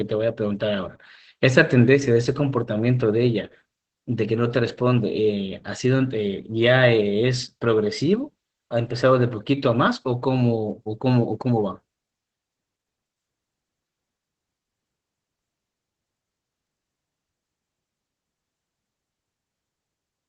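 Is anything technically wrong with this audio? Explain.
Yes. Opus voice compression affects the whole clip. The SILK linear-prediction coder, in wideband mode, encodes the speech excitation coarsely, which fits a bitrate near 12 kbps. The speech sounds muffled, hoarse and slightly robotic. On a spectrogram, all energy stops at a hard ceiling at 8.6 kHz.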